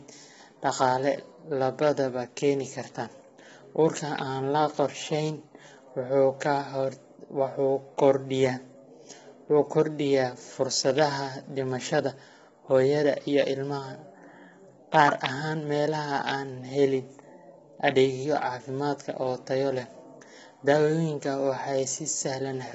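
Throughout, the speech is rough and grainy, with noise between harmonics and nothing above 7.7 kHz, likely from heavy low-delay AAC compression near 16 kbps.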